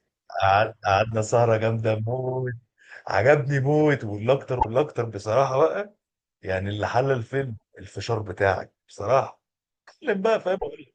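At 4.56 s the speech breaks into a short glitch lasting about 0.1 s. This is damaged data in a compressed stream. Bytes in the encoded file are wrong there, so the decoder misreads the frames and loses sync. It then hunts for the next valid frame header. The same glitch returns at 7.54 s, lasting about 0.08 s, and again at 10.54 s for about 0.1 s.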